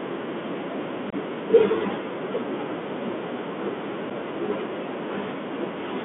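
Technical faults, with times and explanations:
throughout Bluetooth CVSD headset codec: one-bit slope coding keeps only about 200 Hz to 3.5 kHz, leaving granular hiss and scratchy s sounds, unlike a muffled lowpass filter.
1.10–1.15 and 4.10 unconcealed Bluetooth headset packet loss: gaps of 22.5 ms, likely a few lost packets, and 7.5 ms open with abrupt edges, with sound briefly returning quieter rather than being smoothed over.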